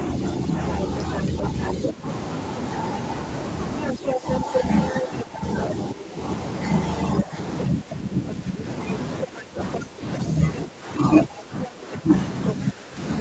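The echo canceller likely could not tell the talker apart from the loudspeaker echo while both sides spoke, so it turned the speech down. This speech suppressed in double talk runs from 0.16 to 2.06 s: the voice sinks by about 10 dB for roughly half a second in all. Within that span, from 1.67 to 1.92 s, the other side's voice leaking through appears, likely left in the microphone signal by incomplete echo removal. It sounds about 5 dB under the talker. From 3.81 to 4.36 s the leaked voice returns at about the talker's own level, likely for the same reason. Suppression in double talk likely sets in again from 3.95 to 6.18 s, dropping the speech about 10 dB for around a second in total. From 7.21 s to the end the canceller likely clamps down harder, with dips of about 15 dB. The other side leaks through twice more in this stretch, likely from residual loudspeaker echo. At 9.73 to 10.18 s it sits about 10 dB below the speech, and from 11.65 s to the end it is about 5 dB below. 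Throughout, everything above 8 kHz is absent, which fits the Opus call path's bandwidth.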